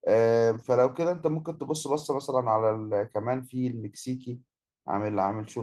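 Nothing is technically wrong with this speech clip.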